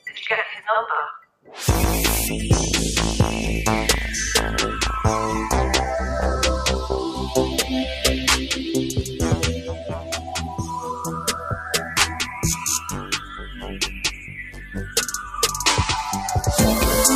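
A noise suppressor built for speech has been left on for the whole clip, applied to material it was not meant for. It hears steady tones, ambience and reverb as noise and pulls them down. Level swings by around 10 dB as it reacts. Onsets come through. Held parts and tails sink behind them. The result pumps and thins throughout.

The first clear cut from the noise suppressor runs from 1.19 to 1.53 s. There the sound drops by about 15 dB, sinking well below its surroundings.

At 1.83 s there is a CD skip. The laser jumped to another turn of the disc's spiral. Playback mutes for about 2 ms, which gives a short tick. It then carries on from a different spot, so the sound jumps abruptly.

Three more cuts by the noise suppressor follow. From 8.98 to 9.23 s the sound dips by about 6 dB. From 9.56 to 12.39 s it sinks by about 12 dB, a long stretch where sustained sound fades. From 12.79 to 14.97 s it drops by about 11 dB again. 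In each, steady or decaying sound is treated as noise and turned down. Decays are cut short while sharper events survive.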